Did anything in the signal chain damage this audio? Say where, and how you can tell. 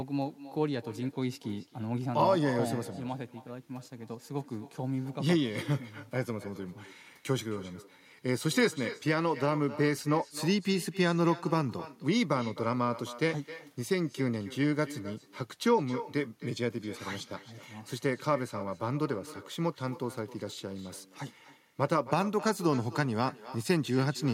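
Yes. Echo with no canceller, throughout, in call processing: speech returns roughly 300 ms later, about 16 dB down, as the far-end loudspeaker leaks unremoved into its microphone.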